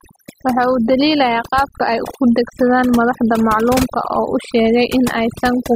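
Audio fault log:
Throughout: overdone noise removal. The noise reduction was set too aggressively, so frequency bands sitting near the noise estimate get pulled down or switched off, taking quiet speech detail with them. Between phrases the background drops to near silence scattered with twinkling specks. On a spectrogram the gaps show as dark floor with isolated bright dots, and the speech bands look ragged and patchy.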